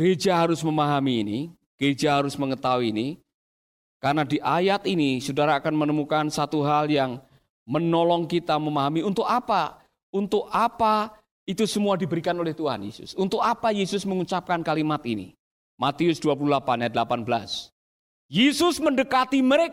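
Speech recording, no technical faults detected anywhere in the audio.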